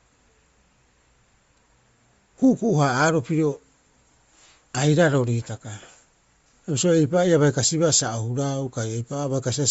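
Throughout the speech, the signal has likely passed through Bluetooth LC3 compression, the LE Audio transform codec, at a low rate that fits a 32 kbps setting with 10 ms frames. Short of bits, the encoder discards much of the upper spectrum and fills the gaps with shaped noise. The damage is plainly audible: the sound carries a breathy, grainy edge, and nothing survives above 7.7 kHz, so the top end sounds dull and cut off.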